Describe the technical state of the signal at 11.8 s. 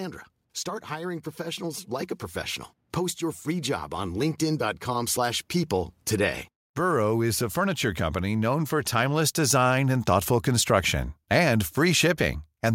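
At 11.8 s the speech signal is intact, with no dropout, distortion, glitch or other fault to be heard.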